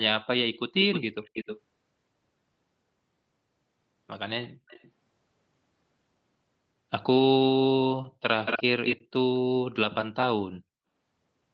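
Echo leak at 1.24–1.59 s, 4.68–4.91 s and 8.45–8.63 s. A delayed copy of the speech returns, 310 ms late, then 227 ms late at the end. The second is faint. The third is nearly speech level. A leaky echo canceller is the likely cause.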